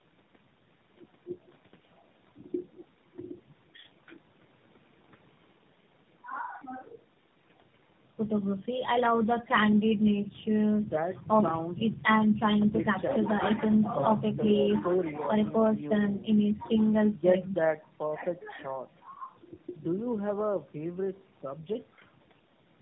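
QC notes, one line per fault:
Throughout, tandem speech coding: the speech carries the combined damage of three low-rate speech codecs in a row, AMR-NB, then GSM full rate, then AMR-NB again, with decoding and re-encoding at each link. Each coder models a signal already smeared by the one before, so the errors pile up into a rough, muffled, warbly quality beyond what any single stage would give. Nothing remains above 3.8 kHz, which fits narrowband telephone coding.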